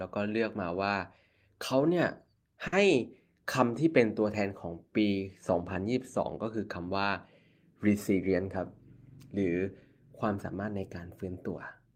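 At 2.67 to 2.87 s the speech briefly hangs on one sound with a faint buzz or dip. This is a short stall from a late packet: the jitter buffer emptied and about 50 ms was stretched until it arrived. From 8.10 to 8.46 s the speech runs hurried at unchanged pitch, about 12% fast. This is a jitter buffer speed-up, trimming roughly 50 ms of pitch periods to shrink excess delay.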